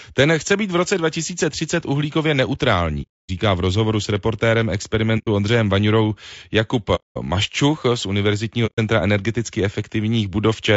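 A speech clip with two kinds of fault. Throughout, the voice sounds rough and grainy, with a hiss filling the gaps between harmonics and a top band that sounds thin and synthetic. The likely cause is low-delay AAC compression (AAC-ELD) at a low bitrate, around 32 kbps. Its short frames resolve pitch harmonics poorly. On a spectrogram the harmonic stripes look smeared, with noise floor between them and a patchy, blocky upper band.

AAC frame loss with muting cuts four holes in the sound, at 3.02–3.30 s, 5.18–5.28 s, 6.95–7.18 s and 8.66–8.79 s. They last roughly 270, 100, 230 and 140 ms. The decoder zeroed the missing frames, and the overlapping windows fade the sound out and back in, so each gap is soft-edged. The waveform shows a short taper into near-silence. The spectrogram shows a clean vertical blank band with blurred edges.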